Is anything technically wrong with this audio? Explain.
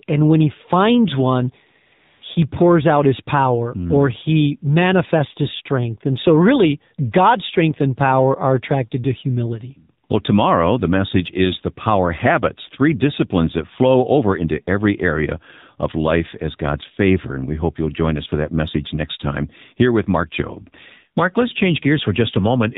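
Yes. Two faults are present.

The AMR narrowband mobile codec affects the whole recording. Audio is band-limited below 4 kHz and rebuilt from a vocal-tract model driven by sparse pulses. The speech sounds muffled, buzzy and clearly synthetic, which fits a low mode around 7.4 kbps.

AMR comfort noise appears at 1.86–1.92 s and 1.94–2.22 s, after "when he finds one" and before "pours out his power", and again at 10.06–10.10 s after "are attracted to humility". The encoder stopped sending speech frames for 60, 280 and 40 ms, and the decoder filled the gaps with smooth synthetic noise that switches abruptly in and out.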